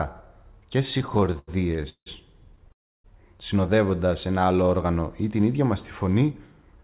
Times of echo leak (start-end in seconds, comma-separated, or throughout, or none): none